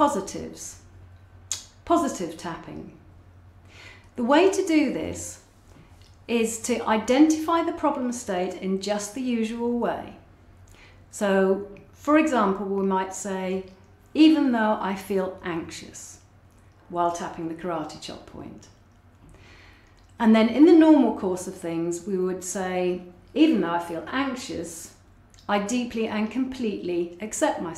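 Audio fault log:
No fault can be heard anywhere in this audio. There is nothing to log for any part of it.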